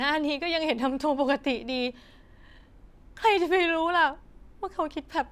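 No technical faults can be heard anywhere in this speech recording. The sound runs without interruption, and at no point does anything technical go wrong.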